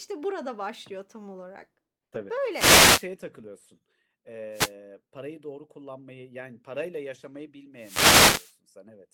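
Wireless microphone noise hits occur at 2.51 to 3.07 s, at 4.52 to 4.73 s just before "parayı doğru kullanmayı yani", and at 7.77 to 8.57 s right after "kullanmayı yani parayla yaşamayı". Each time, the radio link from the microphone weakens as reflected signals cancel the direct one, and the receiver's own noise rises over the speech. The result is a brief swish of static lasting from about a fifth of a second to about 0.8 s.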